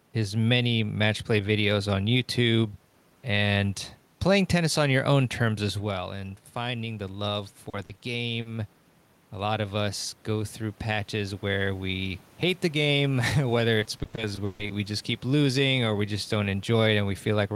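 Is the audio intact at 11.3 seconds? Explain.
No. At 11.3 s the automatic gain rising is under way, from 9.34 to 12.28 s. The input dropped by about 9 dB, so the control slowly lifts gain by about 3 dB, swelling voice and room noise together: a gradually widening waveform envelope and brightening spectrogram floor.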